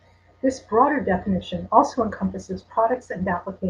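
Speech that, from 1.97 s right after "broader definition" to the end at 3.69 s, turns rough and muffled with high frequencies gone: a call bitrate drop, which fits the encoder falling from about 64 to 19 kbps. Unlike packet loss, the sound stays continuous, with no gaps or repeats.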